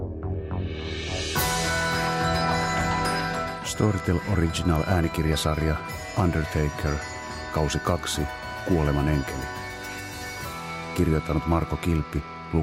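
A block size mismatch (truncated) runs through the whole clip: a steady buzz at 46.9 Hz, which fits 1024-sample blocks, as tails of each block are discarded before the next stage reads them. Pitch is unchanged and the sound plays at 1.0x speed.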